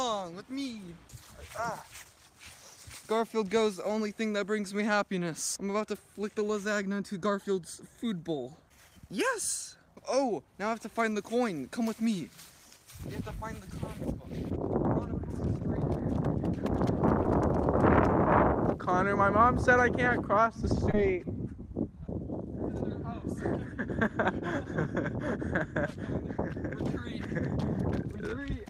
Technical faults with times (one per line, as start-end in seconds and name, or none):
15.84 short concealed packet loss
17.23 short concealed packet loss
20.91-20.94 short concealed packet loss